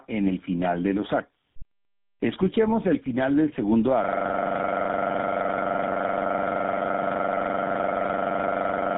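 Tandem speech coding runs throughout. The speech passed through two speech codecs in turn, ending in GSM full rate. It sounds rough, muffled and warbly, with nothing above 3.8 kHz.

At 4.04 s a system hang loop begins and lasts to the end. A 42.67 ms piece repeats at 23.4 Hz, which fits a 2048-sample buffer. It sounds like a harsh, rapid buzz.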